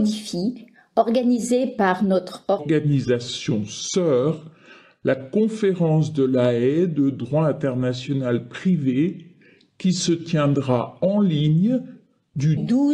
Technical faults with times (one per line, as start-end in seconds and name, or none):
2.59-12.57 section at the wrong speed